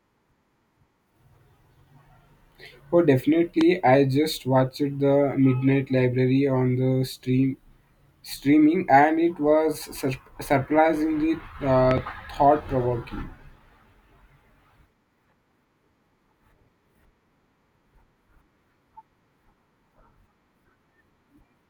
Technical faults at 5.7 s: none

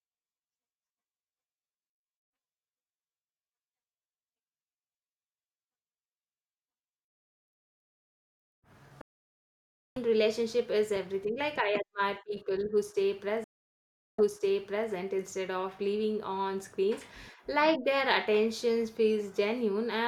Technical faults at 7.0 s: none

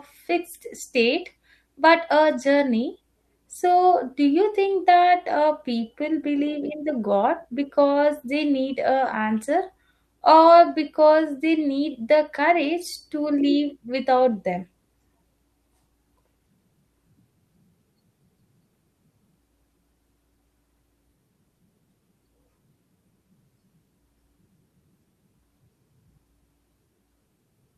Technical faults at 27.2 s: none

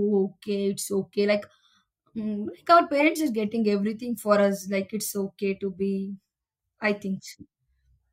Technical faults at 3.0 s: corrupt frame decoded

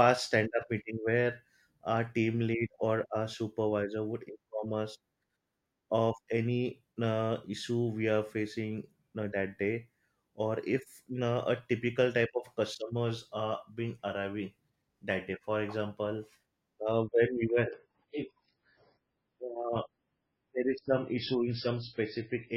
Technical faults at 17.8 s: adaptive stream at a lower bitrate

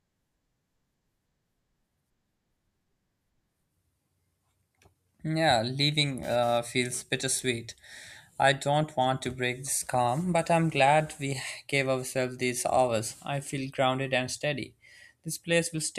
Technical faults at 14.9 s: none

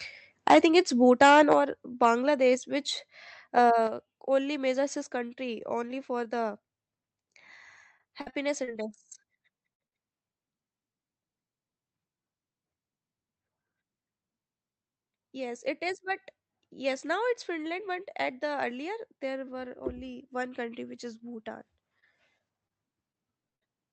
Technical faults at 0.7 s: microphone overload

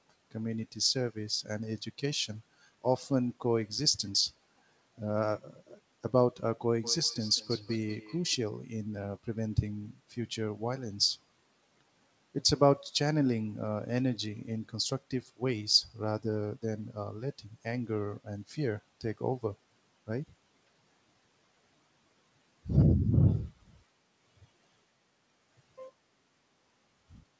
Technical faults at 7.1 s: feedback echo between two devices

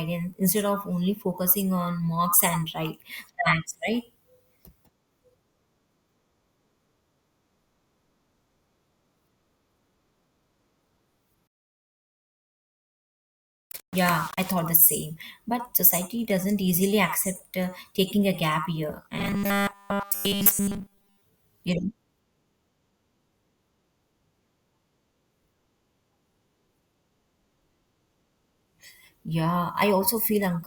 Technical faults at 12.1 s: low bit depth without dither

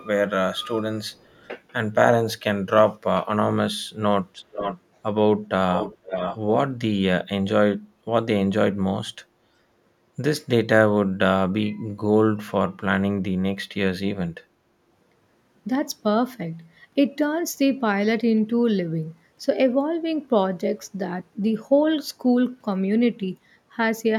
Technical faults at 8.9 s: none

